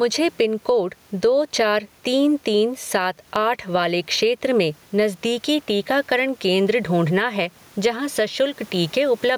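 Gain pumping throughout, likely from excessive gain and a fast limiter: gain swings roughly 10 dB, and waveform looks flattened.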